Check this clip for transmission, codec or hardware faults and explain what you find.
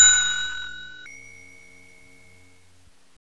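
One fault is present, a wrong sample rate. From 1.06 to 3.17 s, audio plays 1.5 times too fast, raising pitch about 7 semitones. That fits 16 kHz material played at 24 kHz without conversion.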